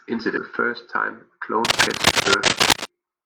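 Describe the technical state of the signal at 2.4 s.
At 2.4 s you're right in the middle of a burst of cable scratch noise that runs from about 1.65 to 2.86 s, starting just after "first time a". It's a dense, ragged crackle and rustle sitting on top of the speech, and it's loud, a few dB above the speech itself. The likely cause is a worn cable or connector being moved, so its contact resistance jumps around rapidly and throws those uneven bursts into the signal.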